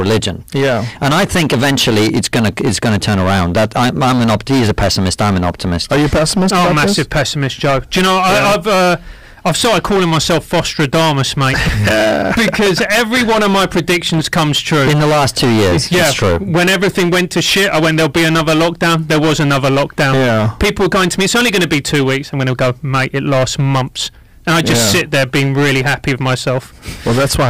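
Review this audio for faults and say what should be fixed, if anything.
Hard clipping runs throughout: driven about 19 dB past full scale, roughly a third of samples hit the ceiling, so waveform tops are flat and a spectrogram shows harmonic smear reaching high up. Prevent it by lowering input gain or adding a limiter before the stage that overloads.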